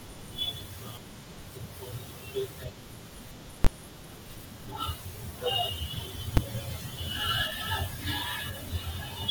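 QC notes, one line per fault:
3.65–3.67 s and 6.37 s, invalid numbers at full scale: two sharp, very loud bangs that cut across the speech, the first lasting 20 ms and the second only 5 ms, both too short for any gap between onset and release to be heard. A calculation produced infinite or invalid values that were forced to the largest positive or negative value, pinning the output at one extreme value for the whole block and producing the violent jump.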